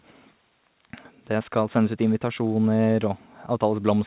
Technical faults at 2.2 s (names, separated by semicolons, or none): none